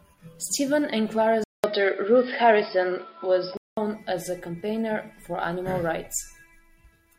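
The input likely switched to a poorer device from 1.44 to 3.77 s. After a 200 ms silence the speech goes dull from "as a campaigner for", with nothing above 5.3 kHz, a level shift of about 5 dB and faint new background noise, then clears at 3.77 s.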